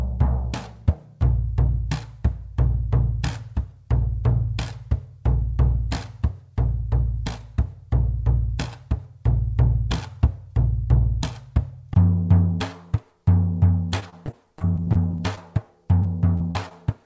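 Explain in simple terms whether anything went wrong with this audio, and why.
Repeated packet loss (robotic sound) shows up twice near the end: from 14.00 to 15.39 s, and again from 16.03 to 16.72 s. Small chunks of the audio went missing in transit, each lasting only a few hundredths of a second. The system filled every hole by stretching out the last bit of sound it had, and the holes came so close together that these stretches sound choppy and machine-like.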